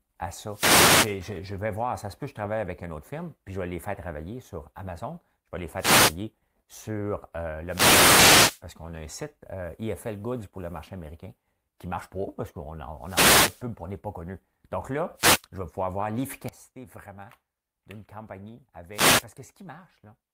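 Six wireless microphone noise hits break into the speech, at 0.45–1.21 s, 5.75–6.19 s, 7.66–8.62 s, 12.98–13.66 s, 15.15–15.44 s and 18.92–19.26 s. Each time, reflections cancel the analogue FM signal, so receiver noise swells as a brief swish or static burst over the voice, crackling in the deeper fades. A digital dropout cuts the audio to silence, but here the speech stays underneath a rising and falling layer of noise.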